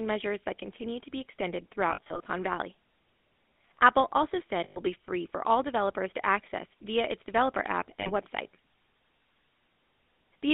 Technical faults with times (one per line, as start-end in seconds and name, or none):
0.00-10.54 GSM full-rate codec
1.90-2.27 lost GSM frames
4.64-4.79 lost GSM frames
8.00-8.11 lost GSM frames